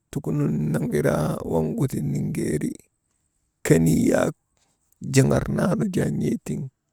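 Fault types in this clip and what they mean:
There are no fault types in this clip.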